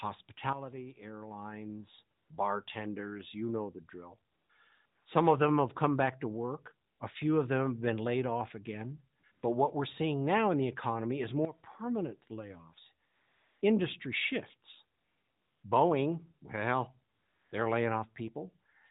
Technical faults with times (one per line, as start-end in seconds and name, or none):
2.18-2.30 AMR comfort noise
4.32-4.50 AMR comfort noise
4.86-5.06 AMR comfort noise
6.88-7.00 AMR comfort noise
9.20-9.42 AMR comfort noise
13.06-13.62 AMR comfort noise
14.98-15.64 AMR comfort noise
17.14-17.52 AMR comfort noise